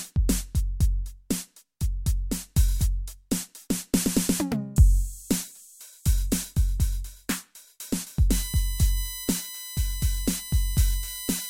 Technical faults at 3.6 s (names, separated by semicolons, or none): none